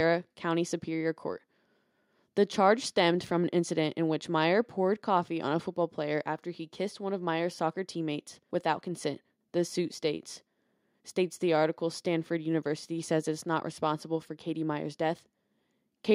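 No technical faults are audible anywhere in the speech recording.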